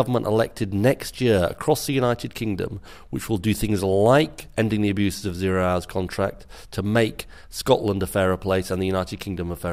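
No technical faults can be heard anywhere in this audio.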